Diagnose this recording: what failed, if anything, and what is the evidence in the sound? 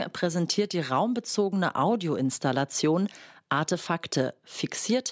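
Nothing in the speech stood out as a fault on listening, so there is no failed stage to point to.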